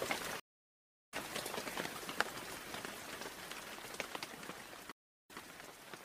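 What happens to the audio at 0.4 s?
The connection drops at 0.40 s and the player has to reconnect and start a fresh decoder partway into the stream, a stream reconnect that runs to 1.14 s. For about 0.68 s the audio goes completely silent. When the sound returns, it picks up at a later point in the stream, skipping ahead by roughly 0.7 s, so a stretch of material is simply missing. The first frame after the restart fades in.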